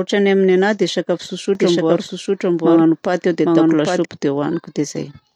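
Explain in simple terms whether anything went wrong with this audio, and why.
From 1.55 to 4.05 s there's a doubled audio track. The speech plays twice, the second copy trailing by roughly seven-tenths of a second at about the same loudness, and it switches on and off abruptly. Likely a second, slower recording path got mixed in.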